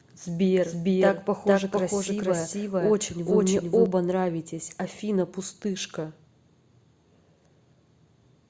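A doubled audio track runs from the start to 3.86 s: a second full-level copy trails about half a second behind, likely from a slower capture path, then cuts off abruptly.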